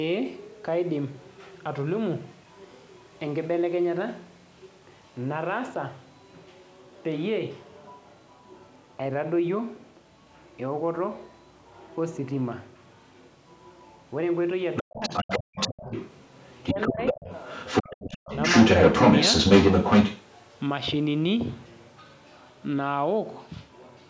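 Around 14.76 to 14.83 s a brief scrap of a second voice sits about 10 dB under the main talker. That's the other side's voice leaking through, likely loudspeaker playback the echo canceller didn't fully remove. It comes back at roughly equal level from 15.01 to 16.1 s, as a faint blip near 16.41 to 16.48 s, and then from 16.66 to 20.24 s it runs about 10 dB louder than the talker.

Between 14.82 and 15.26 s the talker's own voice dips hard, by around 40 dB at worst, over about a fifth of a second in total. It dips again between 16.73 and 17.29 s, by around 20 dB over roughly 300 ms, and briefly at 17.83 to 17.88 s, by around 10 dB. That's speech suppressed in double talk, likely the canceller ducking everything while both sides talked at once.

From 15.44 to 15.55 s the room sound drops out by about 40 dB for around 100 ms and then comes back. That's background gated by the echo canceller while the far side was playing.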